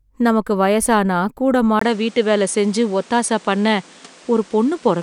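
A speech recording in which, at 1.79 s, the sound drops out for about 20 ms and then returns duller, with nothing above 10.5 kHz and a new background noise roughly 30 dB under the speech, at about the same loudness, through to the end. This is likely an input switched to a poorer device. A spectrogram shows a flat ceiling at 10.5 kHz from 1.79 s, and the waveform shows a brief flat gap at the switch.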